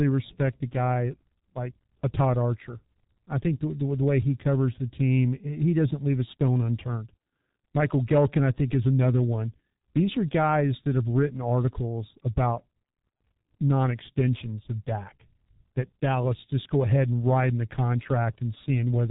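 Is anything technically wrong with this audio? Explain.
Yes. Throughout the speech, the G.723.1 codec's heavy damage is audible: nothing passes above 3.8 kHz, and slow, frame-by-frame voice modelling, fitting a roughly 6 kbit/s stream, makes it hoarse with smeared consonants. Simple low-pass filtering would muffle the speech without adding that hoarseness.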